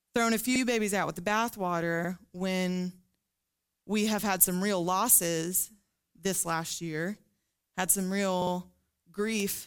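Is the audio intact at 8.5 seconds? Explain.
No. From 8.41 to 8.52 s, just after "had some", the clip has repeated frames: a 52 ms stretch of the compressed stream, which fits a block of two frames, plays two extra times, adding 104.5 ms. It sounds like a brief machine-gun stutter. On a spectrogram the same 52 ms pattern appears three times in a row. In the waveform a short segment repeats.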